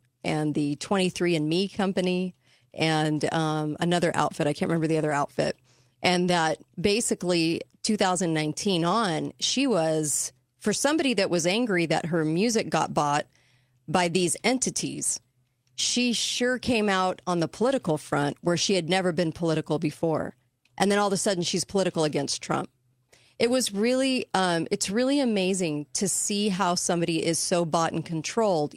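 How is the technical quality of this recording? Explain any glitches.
No glitches or faults heard.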